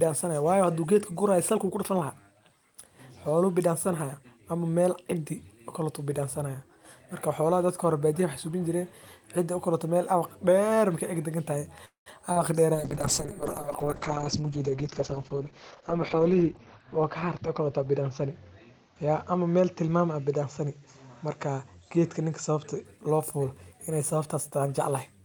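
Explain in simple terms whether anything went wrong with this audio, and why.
A call audio freeze at 11.85 s to 12.08 s: the last sound stretches into a fading buzz, then about 0.13 s of silence, before resuming where it stopped. Packets were likely delayed in transit, so the receiver ran out of audio and added a gap.

Short concealed packet loss at 12.32 s to 12.38 s: 40 ms of the call never arrived in time. The receiver patched the hole by extending the previous sound and blending back, heard as a brief smear or wobble.

A call bitrate drop from 12.76 s to 22.91 s: the connection's estimated capacity fell, so the sender coded the sound much more coarsely. It turns rough and muffled, with everything above about 6 kHz cut off, and is at its worst for nearly 4 s.

A jitter buffer speed-up from 21.90 s to 24.67 s: too much audio had piled up waiting, so the receiver trimmed tiny slices, about a fifth of a second in total. 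The speech runs roughly 7% faster at unchanged pitch, sounding slightly hurried.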